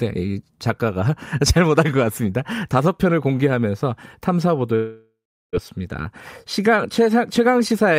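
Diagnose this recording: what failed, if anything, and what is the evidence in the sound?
At the network stage, a long network dropout is the likely cause of the break from 4.75 to 5.56 s. The last sound is stretched into a decaying buzz or hiss, with roughly 0.38 s of it silence, and about 0.78 s of the speech is never heard. On a spectrogram the harmonics smear into flat horizontal bands that fade to a blank column. The waveform shrinks to a flat line before the speech resumes mid-stream, skipping ahead.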